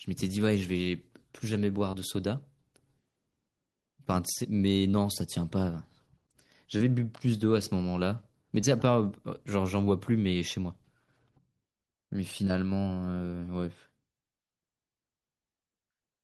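Short concealed packet loss occurs five times in this speech: at 1.91 to 1.95 s, 4.91 to 4.95 s, 6.77 to 6.81 s, 8.61 to 8.65 s and 9.85 to 9.89 s. Each time, about 20 ms of audio arrived too late or not at all. The decoder covered the hole by extending the preceding sound, then blended back into the real signal. Each one is heard as a brief smear or wobble.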